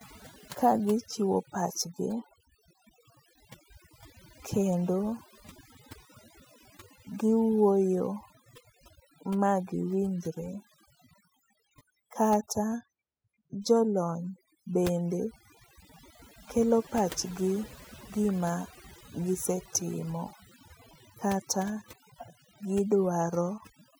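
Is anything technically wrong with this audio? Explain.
Yes. Overdone noise removal runs throughout: aggressive gating of noise-level bands leaves near-silent gaps with twinkling specks and a spectrogram pocked with isolated blotches.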